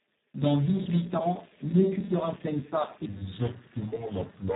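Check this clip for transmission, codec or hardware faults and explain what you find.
Two faults are present: heavy Speex codec damage throughout, and a section at the wrong speed near the end.

The Speex codec damage runs the whole length. The speech sounds hoarse, noisy and partly robotic. This fits a very low Speex setting, around 4 kbps. At that rate the codec has too few bits to describe the excitation, so the coder acts almost like a vocoder. Nothing is heard above 3.8 kHz. The top of the band is simply missing, which makes the sound dull and narrow.

From 3.06 s to the end, there is a section at the wrong speed. It plays at about 0.7 times normal speed. Speed and pitch drop together, by roughly seven semitones. The speech turns deep, slow and dragged. The likely cause is playback or editing against the wrong clock. The jump in pitch and pace is abrupt.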